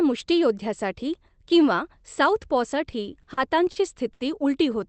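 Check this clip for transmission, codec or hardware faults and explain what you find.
Two transmission faults are audible in this speech, both timing stalls on the call path, where the top end stops at about 8 kHz.

Between 2.91 and 3.77 s the speech drags and catches in a repeated stutter, with six brief holds adding up to about 120 ms, the longest about 40 ms. This is a run of repeated stalls (stutter): packets reached the receiver late, so its jitter buffer kept running dry, and each time it prolonged the last sound until fresh audio arrived. Nothing is lost, but the timing is stretched unevenly.

At 4.13 to 4.22 s one sound is held for about 70 ms too long, with a faint buzz or dip before the speech resumes where it left off. This is a short stall from a late packet: a single packet arrived about 70 ms behind schedule, the jitter buffer emptied, and the receiver stretched the preceding audio to cover the wait rather than skipping ahead.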